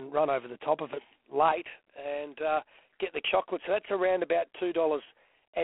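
From the first moment the speech has passed through G.726 ADPCM at 24 kbit/s, a coder that sends only a few bits per sample describing how far the signal strays from its own adaptive prediction. At that rate the prediction error is coarsely quantised, so a harsh, rasping hiss rides on the speech and swells and fades with its level. The telephone line limits the band to roughly 250 Hz to 3.4 kHz, and nothing above 3.9 kHz survives.

At 1.52 s, just after "the top of it", the input was likely switched to a poorer device, and the sound stays on it through the end of the clip. The change is immediate, with no gap at the switch. The new path cuts off everything above 3.3 kHz, so the speech turns duller and more closed-in than before. It also drops by about 5 dB, and a faint new background noise sits far below the speech.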